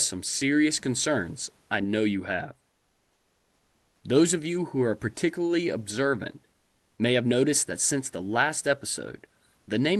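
From 2.71 to 4.03 s the real room background drops out and comfort noise stands in for it: a steady, detail-free hiss about 3 dB quieter. That's likely discontinuous transmission on the call path, with the receiver synthesising noise to fill the 1.32 s gap.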